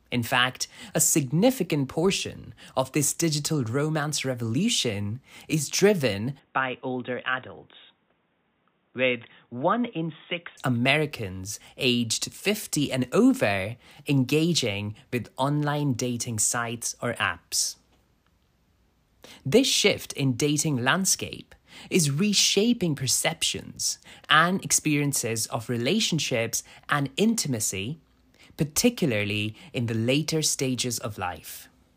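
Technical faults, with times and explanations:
6.39–10.57 s, input switched to a poorer device: speech suddenly turns dull and a little quieter, with nothing above 3.8 kHz and faint new background noise but no gap, likely from a narrower-band mic taking over.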